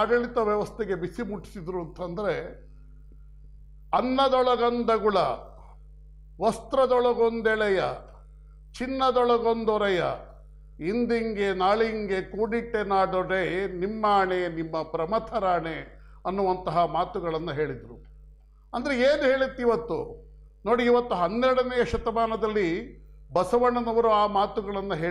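No technical faults can be heard anywhere in the audio; the signal stays stable and intact throughout.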